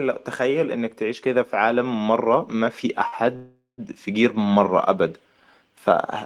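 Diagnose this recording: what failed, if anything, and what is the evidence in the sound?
Clock slip clicks at the converter or driver stage, from 0.18 s to the end: faint ticks about ten per second, likely single-sample slips from a clock mismatch of a few hundred ppm, visible as thin vertical lines.

Automatic gain rising in call processing, 0.37 to 2.83 s: speech and background swell together by about 6 dB, seen as a waveform envelope widening steadily.

Short stall from a late packet at the network and jitter buffer, 3.07 to 3.14 s: the last sound is held for 47 ms, a flat smeared band on the spectrogram.

Call audio freeze, 3.36 to 3.80 s, likely from network packet delay: 419 ms is filled with fading buzz that ends in 130 ms of silence, a waveform gap before resuming.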